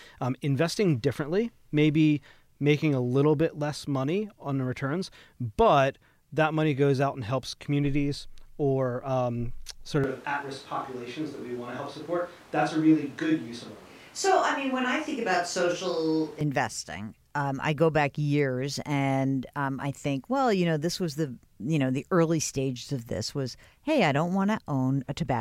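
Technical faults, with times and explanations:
10.04–16.41 s, switch to a distant microphone: after "communities or um sort" speech abruptly turns roomy and thin at similar level, likely from a far microphone replacing the close one.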